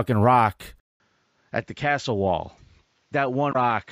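At 0.8 s the speech cuts out for about 200 ms, and when it returns it sounds duller and a bit boxier. Nothing reaches above about 7.4 kHz, the level sits roughly 5 dB lower, and a faint new noise floor appears well under the speech. That stays to the end, and it's most likely an input switched to a poorer device, something like a headset call profile or a lesser microphone taking over mid-recording.

Then from 3.49 to 3.56 s there's a short glitch. That's damaged data in the compressed stream: the decoder hit frames it couldn't read properly, lost sync, and jumped forward to the next frame header it could find, leaving that brief glitch in the audio.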